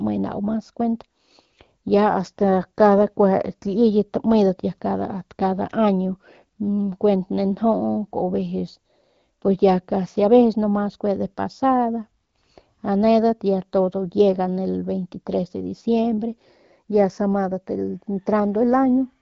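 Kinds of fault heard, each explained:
Nothing stood out on listening to this speech recording, which comes through as AMR wideband (HD Voice) coded audio at 12.65 kbit/s.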